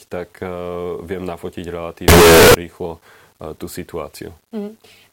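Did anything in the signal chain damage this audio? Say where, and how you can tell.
Yes, at sample-format conversion: from 2.08 to 2.54 s, after "viem nafotiť", speech becomes very loud, harsh distortion with quiet parts equally loud. Unlike clipping, this is likely signed and unsigned mixed up.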